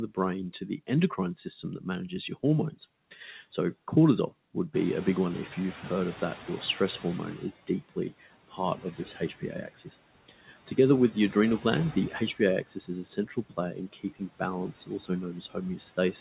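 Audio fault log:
throughout, noise suppressor artifacts: the background sinks about 17 dB between phrases and swells back under speech. The pumping follows the speech, which is what separates it from the steady coding noise and the plain 4 kHz top of the narrowband call codec.
4.74 to 7.5 s, noise suppressor catching up: just after "cortisol would", the room noise has jumped about 17 dB, and it first comes through with less reduction. Over 2.76 s it sinks as the estimate adapts, reaching about 13 dB of reduction. The noise itself is genuine; the lag is the fault.
1.44 to 2.78 s, 7.38 to 9.91 s, 10.29 to 10.78 s, 11.12 s to the end, speech cut by the noise suppressor: parts of the speech itself are pulled down along with the background, by about 14, 17, 15 and 16 dB respectively. The cut parts sound swallowed, covering roughly 0.15 s, 0.7 s and 0.2 s in the first three spans. Unlike the between-phrase dips, these cuts fall on the speech.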